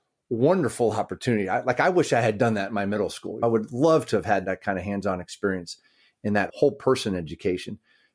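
No technical faults can be heard in the recording.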